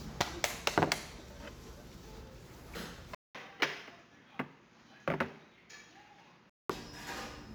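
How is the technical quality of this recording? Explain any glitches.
The recording has two clear technical faults: a constant roughness from sample clock jitter, and a stretch from 3.15 s to 6.70 s where the sound turns duller and quieter.

Sample clock jitter runs through the whole clip. The converter's timing wobbles by a few microseconds, so each sample is taken slightly off time. The error grows where the waveform changes fastest, leaving a grainy hiss about 25 dB below the signal that swells on loud, bright passages and disappears in quiet ones. On a spectrogram it shows as a faint noise haze that tracks the signal's energy.

From 3.15 s to 6.70 s the sound is likely coming from an input switched to a poorer device. A 200 ms silence marks the switch. Afterwards nothing appears above 7 kHz, the level drops about 5 dB, and a new noise floor sits around 55 dB down. On a spectrogram the upper band is cut off flat, and the waveform shows a gap followed by a smaller envelope.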